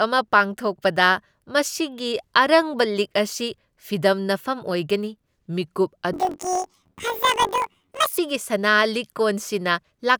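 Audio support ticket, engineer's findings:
Speech jumps an octave high with a 46 Hz flutter, 6.13 to 8.20 s. Planar audio read as interleaved: 21.77 ms blocks of left-then-right samples played as L/R pairs, so each block plays twice at double speed. Check the format conversion step.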